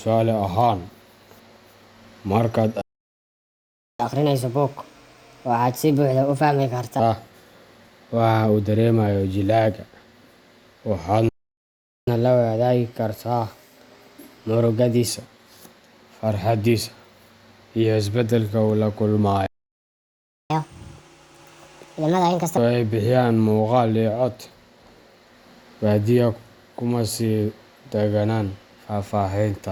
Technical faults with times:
2.81-4.00 playback stall
4.00-7.00 catch-up at higher speed
11.29-12.07 playback stall
12.07-15.07 catch-up at higher speed
19.46-20.50 playback stall
20.50-22.57 catch-up at higher speed

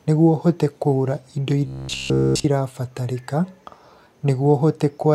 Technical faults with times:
1.66-2.46 robotic sound from repeated short buffers

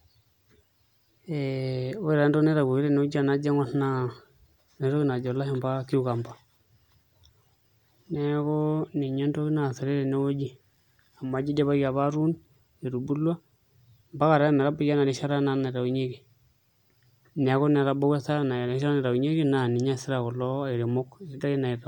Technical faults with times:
none

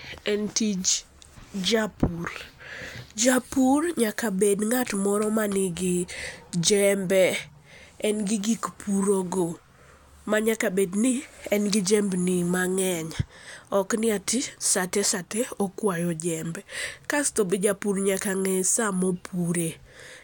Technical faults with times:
9.48 dropped samples

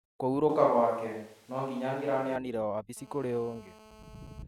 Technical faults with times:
0.49-2.36 switch to a distant microphone
2.97-4.43 GSM phone buzz

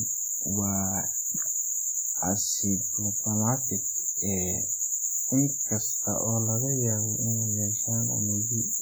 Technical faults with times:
0.00-8.82 WMA compression

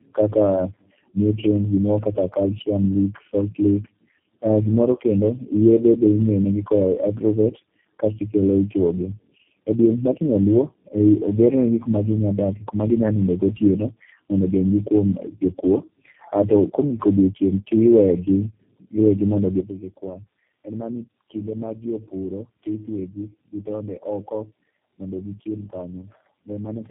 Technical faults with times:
0.00-26.90 tandem speech coding
19.60-26.90 sudden gain jump

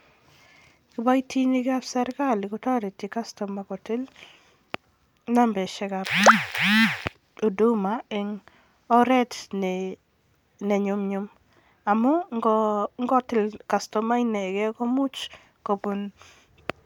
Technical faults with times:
0.00-16.86 generation loss

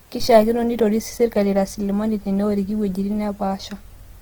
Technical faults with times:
0.00-4.22 Opus compression

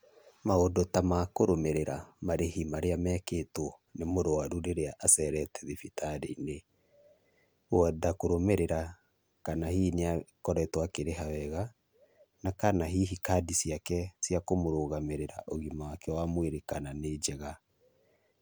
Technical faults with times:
none

